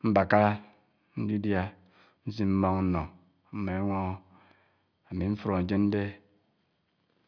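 No technical faults are audible anywhere in this speech.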